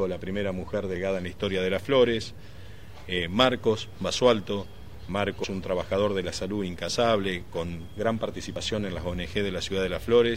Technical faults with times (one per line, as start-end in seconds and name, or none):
5.44 dropped buffer (overrun)
8.56 dropped buffer (overrun)